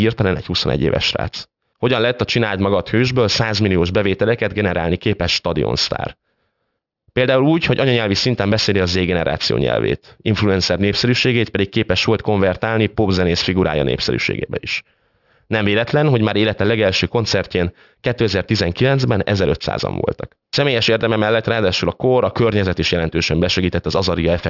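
Throughout the speech, the audio shows aliasing: it appears to have been resampled down to 12 kHz without an anti-aliasing filter, so energy above the 6 kHz folding point was not removed but reflected back into the band below it. Those mirrored components are fairly strong, roughly 15 dB below the speech, and bear no harmonic relation to it. Sibilants come out gritty and metallic, and the spectrum stays dense right up to the 6 kHz edge.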